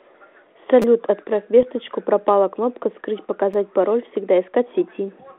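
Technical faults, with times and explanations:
0.82–0.84 s and 3.54 s, repeated buffer: new audio arrived late, so the same tiny slice of speech replays with hard joins. Four quick repeats, then two, give a brief buzzing stutter that fits a 5 ms buffer. Nothing is skipped, unlike a dropout, and the clean repeats have none of the rough decoder ringing heard at 1.63 s.
1.63–1.68 s, bit errors on an ADPCM link: flipped bits reach the 32 kbit/s G.726 decoder, whose band-limited telephone sound is heard throughout, and throw its step size and predictor off. The result is rough pops with short level jolts that ring on for milliseconds. It decays irregularly rather than repeating one identical slice.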